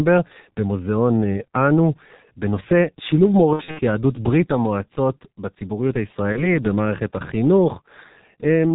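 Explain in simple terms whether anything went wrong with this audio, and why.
Two things went wrong. First, the whole recording has been squeezed through the G.723.1 codec, an old internet-phone format that throws away everything above about 4 kHz and only refreshes its picture of the voice every 30 ms or so. That's why the speech sounds muffled and a bit hoarse all the way through, and why sharp sounds like s and t come out smeared rather than crisp. The damage here is heavy.

Second, there's VoIP packet loss concealed by the speech codec. Around 3.53 to 3.81 s, chunks of the signal went missing, roughly 150 ms in total spread over about 240 ms, with the longest gap around 60 ms. The decoder filled the holes by stretching out the last bit of voice it had, so you hear a buzzy or noisy, fading smear instead of clean speech. The same thing happens more briefly at 6.32 to 6.55 s, which sounds like a single lost 30 ms chunk. 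That blip lingers a little after the gap itself because each bit of decoded sound builds on the one before.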